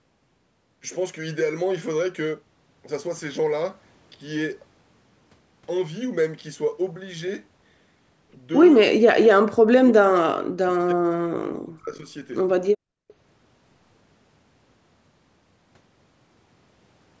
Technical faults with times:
9.09-11.22 speech suppressed in double talk
11.69-12.08 speech suppressed in double talk
13.08-13.13 echo leak

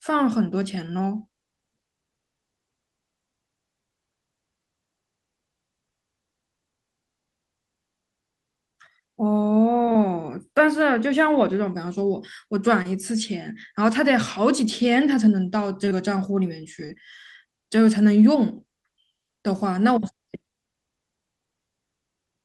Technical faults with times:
9.85-9.96 short concealed packet loss
12.82-12.87 short concealed packet loss
15.85-15.93 short concealed packet loss
16.87-16.91 short concealed packet loss

